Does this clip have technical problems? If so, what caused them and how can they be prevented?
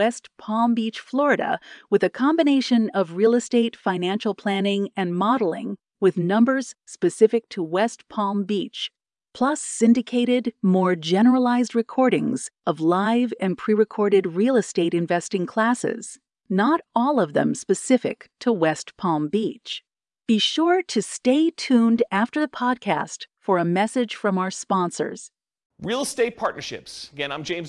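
No, the speech signal holds steady and continuous, with nothing in its technical state that calls for a fix or for preventive measures.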